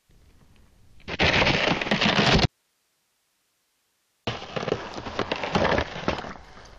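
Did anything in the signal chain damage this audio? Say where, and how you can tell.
Yes: an audio dropout to a faint residue from 2.45 to 4.27 s, likely an analogue connection break, leaves only hiss about 45 dB down, seen as a sharp-edged waveform gap.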